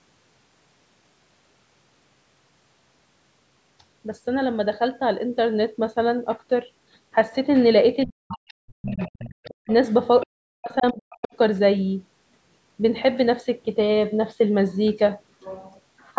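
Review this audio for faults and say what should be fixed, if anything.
Speech suppressed in double talk occurs from 8.06 to 9.13 s and again from 10.26 to 11.31 s. The talker's level falls by as much as about 40 dB. The likely cause is an echo canceller that, with both sides talking at once, muted the near talker along with the echo.

The other side's voice leaks through at 8.29 to 8.53 s, 8.86 to 9.7 s, 10.2 to 10.26 s and 11.1 to 11.18 s. It sits about 15 to 30 dB below the speech. Echo cancellation likely left part of the loudspeaker signal in the microphone pickup.

Using a headset, or tuning the echo canceller for better double-talk handling, would prevent both faults.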